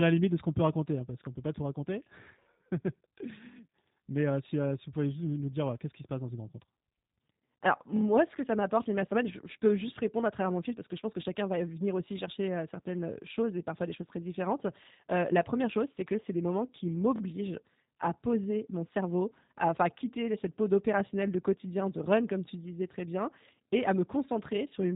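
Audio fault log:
throughout: G.729 codec. The speech has that rebuilt, slightly buzzy quality you get when a codec models the vocal tract and pitch and then sketches the excitation with a handful of pulses per frame, which fits an 8 kbit/s G.729A-style path. Intelligibility holds up, but the damage is plainly audible: the edges sound rough and a bit synthetic. The top is cut hard, with nothing above about 3.8 kHz, so sibilants lose their sparkle and the whole thing sounds narrow.
17.16–17.21 s: repeated buffer. Right after "c'est des moments qui", a short chunk of about 23 ms plays three times in a row, which points to a 1024-sample buffer. Fresh audio didn't turn up in time, so the device replayed what it already had, twice over. Each restart is a hard join, so you hear a quick stutter. It's essentially an insertion: pretty much nothing is lost, the timing just hiccups.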